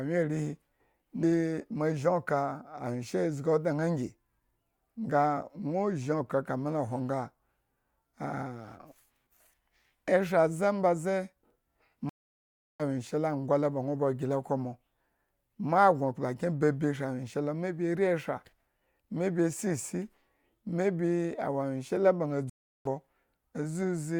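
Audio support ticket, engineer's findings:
Stream reconnect at 12.09–12.83 s and 22.50–22.88 s: connection dropped, player re-established it and restarted the decoder mid-stream. Dead silence of 0.70 s, then 0.36 s; speech resumes about half a second later, then a little under, with the gap's content skipped.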